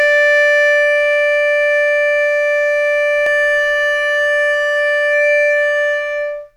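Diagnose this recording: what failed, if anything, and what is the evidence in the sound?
From 3.26 s to the end, the music sounds doubled, with a dry copy about as loud trailing by roughly 300 ms. This doubled audio track likely comes from a slower second capture path.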